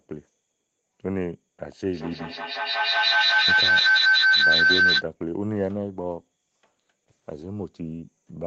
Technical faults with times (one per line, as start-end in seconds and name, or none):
1.93-5.08 feedback howl